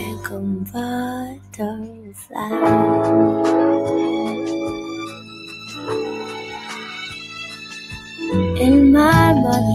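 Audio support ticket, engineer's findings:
Noise suppressor applied to music or sounds: speech-tuned suppressor left active across the whole clip. Sustained and decaying content treated as noise, level swinging by about 15 dB; sound pumps and thins. Waveform: envelope breathing; spectrogram: held partials and tails fading in patches.

Sound cut by the noise suppressor: gain pulled down at 0.00–0.42 s (about 9 dB), 0.61–0.77 s (about 12 dB), 1.25–2.35 s (about 13 dB), 5.09–5.82 s (about 11 dB), 6.53–6.89 s (about 5 dB) and 7.54–8.20 s (about 7 dB). Attacks survive while sustains sink. Visible as scooped waveform troughs and darkened spectrogram bands.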